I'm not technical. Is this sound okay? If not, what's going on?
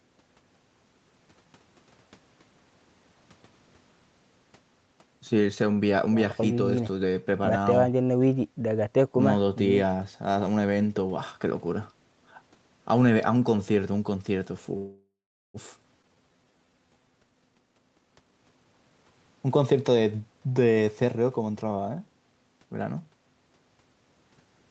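No. There are three call-related faults in this speech clip.

From 14.77 to 15.57 s there is a call audio freeze. The sound stalls, the last bit turns into a fading buzz or hiss, and it then goes quiet for about 0.4 s. Packets held up on the network likely left the receiver with nothing to play. When the speech resumes, nothing is lost; it is just late.

Between 16.02 and 16.06 s there is a skip ahead. Playback jumps forward almost without a gap, and about 0.3 s of speech is missing. That stretch was dropped on the way or by the receiver while later speech was already waiting, and the two sides are joined nearly directly.

From 17.18 to 19.12 s there is a jitter buffer speed-up. The speech runs at about 133% speed with its pitch unchanged, so it sounds hurried. The receiver was holding too much backed-up audio and trimmed tiny slices, roughly 0.7 s in total, to cut the delay.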